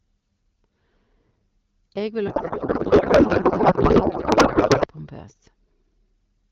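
From 2.27 s to 4.87 s the speech gives way to garbled noise and warbling tones that barely track it, then returns. This is a codec payload misread. The AMR-WB frames are still arriving, but the decoder is unpacking their bits in a different layout from the one the sender used. The pattern fits octet-aligned payloads being parsed as bandwidth-efficient. Either side of that span the wideband coding sounds clean, consistent with roughly 12.65 kbit/s.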